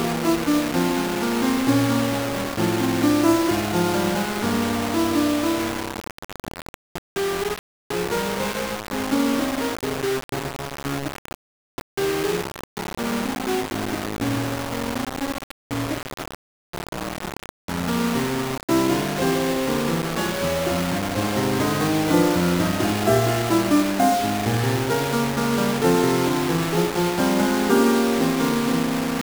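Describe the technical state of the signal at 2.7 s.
At 2.7 s the music is most likely running at only about 4 bits, rounded to the nearest level with no dither, a condition present across the whole clip. With so few steps, the rounding error tracks the waveform and sits only around 10 dB below the music. That makes the sound coarse and grainy, a gritty distortion that shifts with every change in the music.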